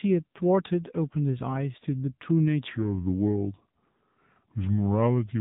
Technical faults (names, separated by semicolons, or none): AMR narrowband mobile codec; section at the wrong speed